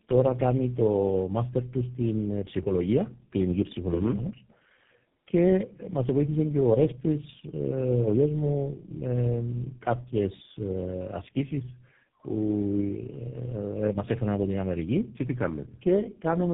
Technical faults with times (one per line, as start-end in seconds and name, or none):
0.00-16.54 tandem speech coding